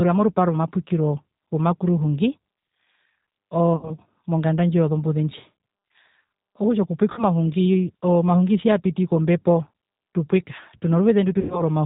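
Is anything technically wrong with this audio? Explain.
Yes. The speech runs through the G.729 codec for its whole length, which fits its 8 kbit/s rate. The spectrogram shows nothing above 4 kHz, and the voice sounds slightly rough and synthetic because it is rebuilt from a vocal tract filter, a pitch predictor and a few pulses per frame.

There are also three bursts of VoIP packet loss concealed by the speech codec, at 3.74 to 3.93 s (just before "monganda ndji yozombuze"), 7.12 to 7.24 s, and 11.41 to 11.62 s. Where packets went missing, the decoder extended its last pitch and filter with falling gain, so the sound turns into a fading buzzy tone or coloured noise. In the spectrogram, harmonics stretch into flat, smeared bands, and in the waveform the envelope decays smoothly.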